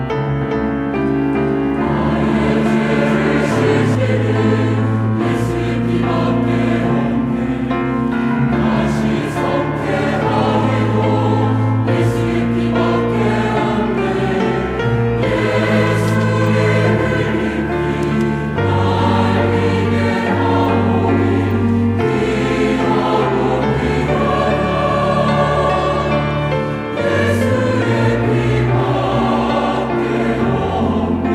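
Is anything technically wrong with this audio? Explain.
Yes. From about 0.41 s to 3.95 s there's a doubled audio track: the same sound comes through twice, with a second, full-band copy trailing roughly 400 ms behind and sitting about 5 dB lower. It's dry, with no tail or room around it, and it cuts in and out abruptly at those edges. That points to the audio being likely captured a second time through a slower path, giving a repeat rather than anything acoustic.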